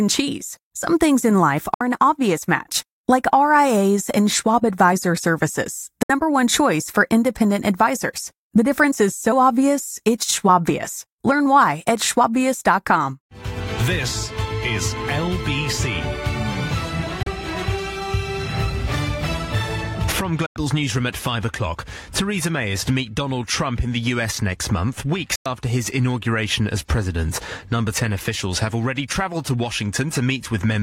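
Digital broadcast dropout cuts the audio five times: at 1.74–1.81 s, 6.03–6.10 s, 17.23–17.27 s, 20.46–20.56 s and 25.36–25.46 s. Each time the receiver stopped getting usable frames and muted, fading out in about 3 ms and leaving holes of 64, 64, 32, 96 and 96 ms, which fits whole 32 ms frames being discarded. The sound resumes further along, and whatever was broadcast during each gap is gone.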